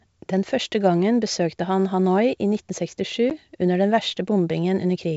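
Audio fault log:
3.30–3.32 s, packet loss on an ADPCM call: about one packet of G.722 wideband speech drops out, leaving a hard-edged silent gap of about 10 ms, a sharp vertical notch on the spectrogram and a flat line on the waveform. Speech then resumes with brief, slight distortion, because the decoder's predictor and step size have lost track of the sender's and take some tens of milliseconds to realign.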